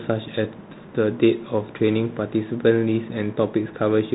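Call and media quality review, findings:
Bluetooth CVSD headset codec, throughout: speech band-limited, nothing above 3.8 kHz; one-bit adaptive-step delta coding adds granular hiss and scratchy s sounds, consistent with a 64 kbps headset link.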